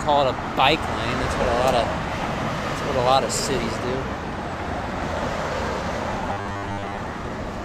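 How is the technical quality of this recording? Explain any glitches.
The recording has one glitch, between 6.33 and 6.98 s: robotic sound from repeated short buffers. The likely cause is new audio arriving too seldom, so the playback path kept looping its most recent fragment, about 10 ms long, while the real audio went missing. Most of that stretch is repeats rather than real signal. Each loop restarts every 10 ms, stamping a fixed 100 Hz buzz over the audio, which turns rigid and metallic and only loosely follows the original.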